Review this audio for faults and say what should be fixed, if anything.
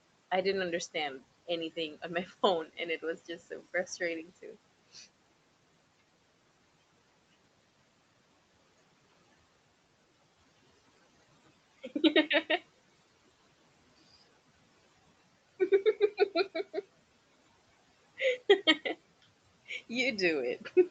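Speech cut by the noise suppressor occurs twice, from 4.25 to 4.56 s and from 4.93 to 5.06 s. In each span the suppressor mistook low-level speech for background and pulled it down with the room noise, by about 10 dB and about 12 dB at the deepest points, so roughly a tenth of a second of speech sounds swallowed or faint. Reducing the suppressor's aggressiveness or raising its speech-presence sensitivity would prevent this.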